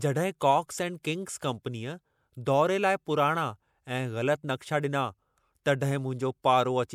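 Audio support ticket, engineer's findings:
Pre-echo at 1.03 s, right after "जॾहिं कॉक्स एंड": brief hiss leading into a sharp attack, about 16 ms ahead of it, attack softened. Transform codec: block noise smeared before the transient. Unlike a click, the hiss rises into the onset rather than sitting apart as an isolated spike.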